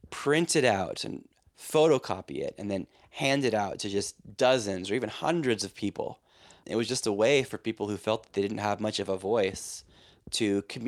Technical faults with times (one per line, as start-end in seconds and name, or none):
none